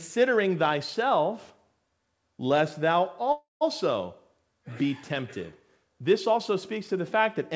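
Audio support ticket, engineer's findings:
Buzzy tail fading to silence after "lest thou", 3.32–3.63 s, then speech resumes intact; call audio freeze, likely jitter buffer underrun from delayed packets, about 0.29 s gap inserted, roughly 0.15 s silent.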